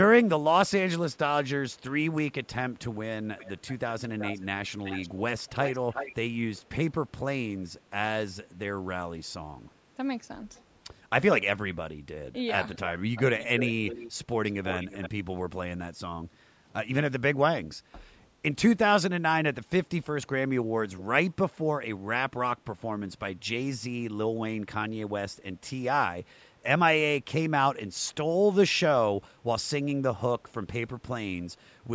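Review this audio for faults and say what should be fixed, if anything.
There's an echo leak: a delayed copy of the speech comes back at 3.38–6.62 s and 12.74–15.1 s (about 10 dB down, 378 and 342 ms late), with faint scraps at 10.54–10.63 s and 20.97–21.03 s. It's likely loudspeaker sound the canceller didn't fully remove. Fix the acoustic coupling or the canceller tuning on the loudspeaker end.

There's also background gated by the echo canceller: the room sound dips about 7 dB at 16.42–16.66 s and 17.8–17.92 s while the canceller clamps the mic. Gentler suppression would keep the background steady.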